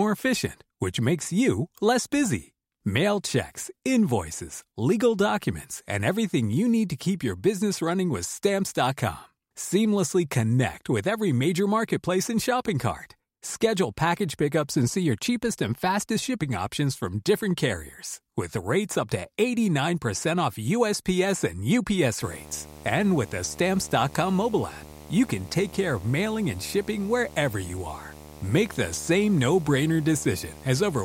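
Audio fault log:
22.22 to 31.04 s, video or display buzz: A buzz enters beneath the speech and lasts to the end of the clip. Its fundamental sits at 75 Hz, the field rate of a display refreshing 75 times a second. A screen or video cable is coupling its interference into the audio path. The sharp edges of each refresh add hash above the buzz. The buzz sits roughly 20 dB below the speech.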